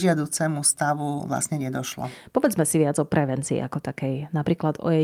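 No technical faults can be heard anywhere in this recording of speech. There are no dropouts, glitches or other breaks in the sound at any point.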